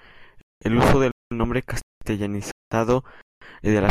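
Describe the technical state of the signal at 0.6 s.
At 0.6 s the signal is inside a gap between chunks, a hard-edged silence from 0.41 to 0.61 s lasting 200 ms, at a join between 0.5 s chunks. Unlike a dropout, nothing is missing: the speech resumes exactly where it stopped.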